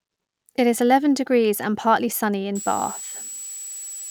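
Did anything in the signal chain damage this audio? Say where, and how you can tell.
Yes. In the analogue power stage, a switching supply whistle enters at 2.55 s, after "degrees and partly sunny", through the end: a tone drifting between 7.74 and 7.80 kHz, about 15 dB below the speech.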